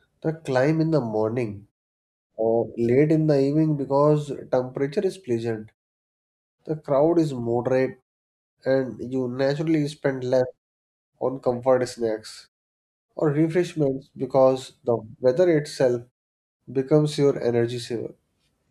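Speech clip, no technical faults detected.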